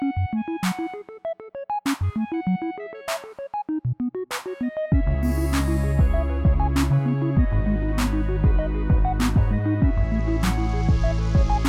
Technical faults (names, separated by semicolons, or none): none